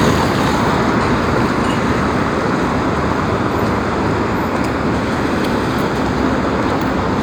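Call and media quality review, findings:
No faults found in this audio; nothing to escalate.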